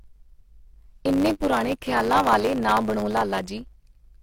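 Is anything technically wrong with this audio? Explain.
Yes. A block size mismatch (truncated) runs through the whole speech clip. One stage hands over longer blocks than the next accepts, likely 512-sample blocks, and each block's tail is discarded. The splices produce a 100 Hz buzz and make the speech run about 1.07 times fast at roughly normal pitch. A waveform shows a discontinuity every 10 ms, and a spectrogram shows vertical striations at that spacing, with a comb of 100 Hz harmonics.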